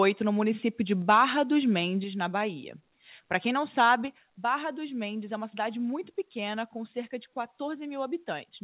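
At 1.02 s the whole speech signal, voice and room alike, drops abruptly by about 2 dB, a step rather than a fade. That is a microphone volume stepped down event, most likely the call software lowering the device's input volume in one move because it judged the input too hot. The same step recurs at 2.04 s, deeper at about 5 dB, and at 4.08 s at about 3 dB, each time leaving the level sitting lower afterwards.

From 1.09 to 1.23 s the loudest syllables take on a harsh, crackly edge, with peaks sounding flattened and splattered. This is microphone overload: the input was driving roughly 3 dB past the converter's ceiling, so the tops of a few percent of the waveform are sliced off, likely because the input volume was still set too high even after the first reduction. Across the clip the band stops at 4 kHz, which fits a narrowband telephone codec such as G.711.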